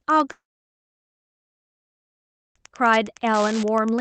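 Wi-Fi interference runs through the whole speech clip as a steady ticking about ten times a second. The tick spacing matches a 102.4 ms beacon from a nearby Wi-Fi radio, whose bursts the audio circuit rectifies into clicks. The ticking sits roughly 25 dB below the speech. It passes through the call codec path, whose top end stops near 8 kHz, consistent with Opus at a modest bitrate.

From 0.31 s to 2.64 s there is a long network dropout, likely a stall in packet delivery lasting about 2.2 s. The receiver carries the last sound forward as a short buzz or hiss that fades within a fraction of a second, and then the line falls silent for most of the gap. The speech resumes at 2.64 s further along, with the material from the missing stretch never played.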